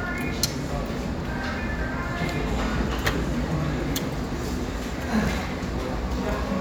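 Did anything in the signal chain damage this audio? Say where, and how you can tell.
No, nothing in the chain seems to have damaged these sounds, and there's nothing to point to at any stage along the way.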